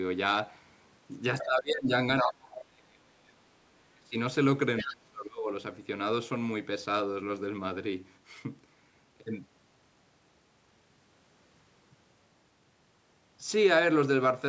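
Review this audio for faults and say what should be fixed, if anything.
Other side's voice leaking through, at 1.39 to 1.45 s and 4.78 to 4.93 s: a brief second voice sits under the speech, about 15 dB and then about 10 dB below it. The likely cause is loudspeaker playback reaching the microphone and not fully cancelled by the echo canceller. A stronger echo canceller, or headphones in place of the loudspeaker, would prevent it.

Speech suppressed in double talk, at 1.44 to 1.9 s, 2.22 to 3.42 s, 3.59 to 3.73 s, 3.94 to 4.15 s and 4.82 to 5.51 s: the speech dips sharply, by roughly 25 to 35 dB at its deepest, while the other side talks. The likely cause is an echo canceller unable to separate the near talker from the echo and ducking both. A canceller with better double-talk detection, or less loudspeaker pickup, would prevent it.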